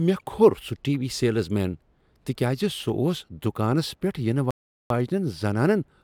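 At about 4.51 s the speech drops into silence and picks up again at 4.90 s, right where it left off. That's a rebuffering stall: the player ran dry of downloaded audio and waited for more, so nothing's missing, just about 0.4 s of dead air inserted.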